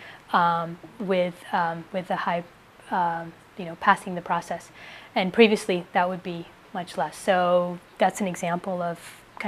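Nothing in the audio points to a technical fault. No dropout, distortion or other defect can be heard at any point in the clip.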